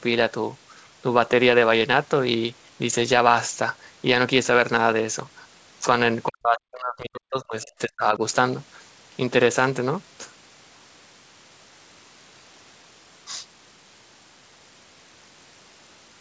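From 6.28 to 8.21 s, both ends of the call were likely talking at once, and the echo canceller, unable to tell the near talker from the loudspeaker echo, turned everything down: speech suppressed in double talk. The voice dips and breaks up in pieces, losing about one and a half seconds in total, with the deepest cuts falling around 40 dB. The G.722 call path's 8 kHz ceiling stays unchanged through the episode.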